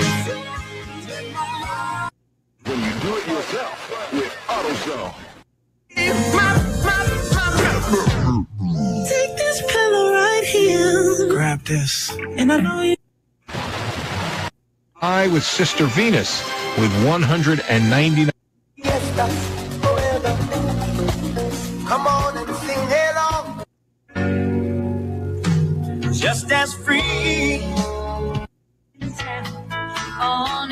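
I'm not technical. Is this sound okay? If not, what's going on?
No. A noise suppressor applied to music or sounds is running the whole way through. It is a tool built for speech. It treats steady, held sound and lingering echo as background noise, so it keeps turning them down. Sharp starts still get through. The held parts sink. So the level keeps rising and falling, and the sound pumps and thins out instead of staying steady.

At certain moments the sound is cut by the noise suppressor even harder. The steady parts drop away noticeably, and fading tails end early. This happens at 0.23–2.66 s, 4.39–5.96 s, 8.44–9.4 s, 11.53–13.5 s, 14.5–15.02 s, 18.33–18.82 s, 21.71–24.16 s and 25.15–30.21 s. The longest stretch is near the end, with about three seconds of sound pushed down. Listen for sound that seems to shrink or vanish while it should still be ringing.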